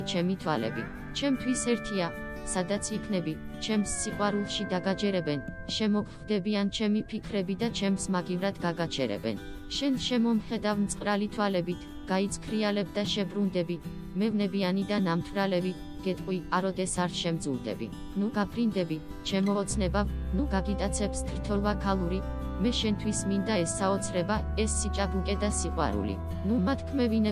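No technical faults can be heard anywhere in the sound.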